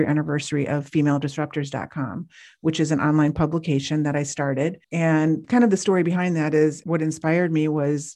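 From 0.29 s to 7.77 s, periodic USB or driver dropouts skip a tiny slice of audio every 0.5 s, producing regular ticks throughout the speech.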